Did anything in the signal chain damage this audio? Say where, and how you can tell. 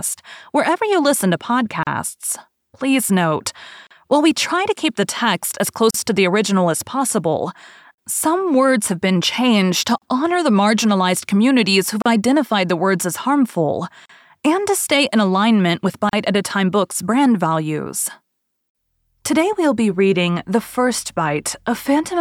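Yes. Gaps at joins of encoded pieces appear at 1.83, 3.87, 5.91, 7.94, 9.98, 12.02, 14.06 and 16.09 s. This is a codec-stage fault: silences of about 37 ms recur every 2 s where separately encoded segments were joined untrimmed, keeping each run's start delay and end padding. The speech drops out, then resumes where it stopped.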